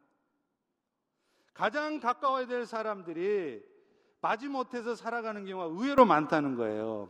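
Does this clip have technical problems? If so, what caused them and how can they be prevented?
Yes. At 5.98 s the speech and background noise jump up together by about 13 dB and stay raised to the end. This sudden gain jump was likely caused by a digital gain change applied instantly, without a ramp. Ramping every gain change over a few milliseconds prevents it.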